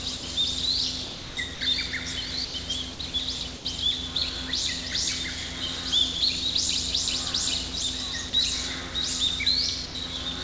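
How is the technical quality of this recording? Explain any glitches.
The recording has repeated short gaps where the sound is replaced by steady noise. Nothing above 8 kHz comes through, which fits a G.722 call codec.

Sound dropped by the voice detector occurs at 0.17 to 0.23, 2.45 to 2.54, 3.56 to 3.65, 8.30 to 8.33 and 9.86 to 9.95 s. Each gap lasts 30 to 90 ms. The sender likely judged the sound as background and stopped sending, so comfort noise fills in.

Sound chopped by the voice detector occurs at 1.04 to 1.61 s, with 390 ms replaced, and at 2.93 to 3.14 s, with 90 ms replaced. The detector likely switched on and off repeatedly. This leaves several holes filled with comfort noise.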